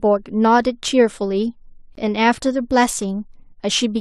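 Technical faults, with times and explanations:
1.95 s, gap between stream segments: the speech drops into a hard-edged hole of about 17.5 ms of silence. Two stream segments' timestamps leave a small gap, and the player fills it with silence, so the sound stops abruptly and resumes with nothing lost.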